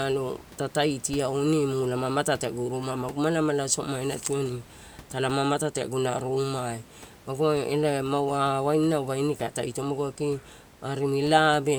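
Speech recording with no technical faults; the room's background noise sits about 24 dB below the speech and belongs to the recording, not the system.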